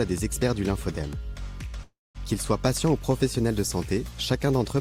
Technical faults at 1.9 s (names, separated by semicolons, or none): call audio freeze